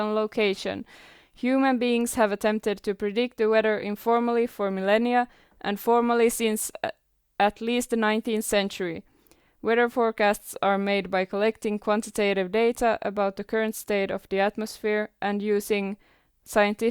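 No technical faults can be heard anywhere in the speech.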